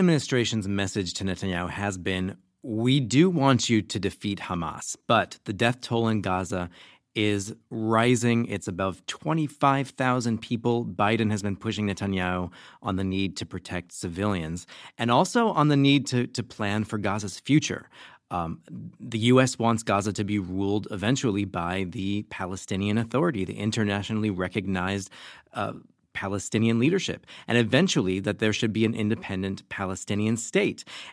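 No technical faults are audible.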